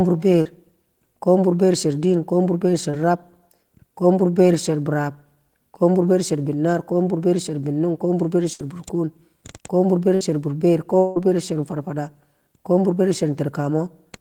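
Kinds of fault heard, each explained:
Short concealed packet loss: two brief holes, at 0.41 s and 2.91 s, each about 20 to 40 ms of missing audio, were patched by extending the preceding sound and blending back in, heard as a quick smear or wobble in the speech.
Burst of packet loss: at 8.53 s and 10.15 s, roughly 60 ms of consecutive audio failed to arrive. The receiver stretched the last sound as a fading buzz or hiss, then speech resumes with that stretch missing.
Long network dropout: at 10.99 s, about 180 ms of speech is gone, bridged by roughly 170 ms of continued, decaying sound before the audio picks up again. This is likely a brief interruption in the network path rather than a shorter burst.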